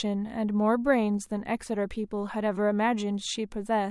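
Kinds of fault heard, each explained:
No technical faults can be heard in the signal: the level stays steady, with no dropouts, interruptions or added disturbances anywhere in the recording.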